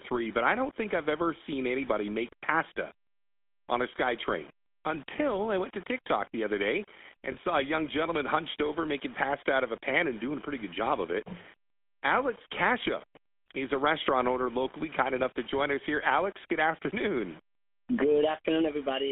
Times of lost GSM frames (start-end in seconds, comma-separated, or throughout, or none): 7.32-7.35